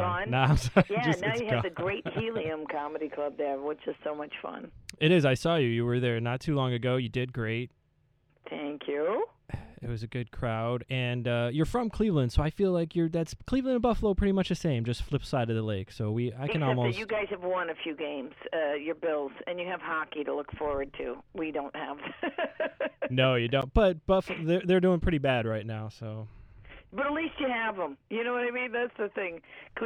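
At 23.62 s the output buffer likely went unfilled in time, so a block of digital silence lasting about 11.6 ms, which fits a 512-sample buffer, was played. The sound drops to silence and returns with no fade, heard as a tick or dip.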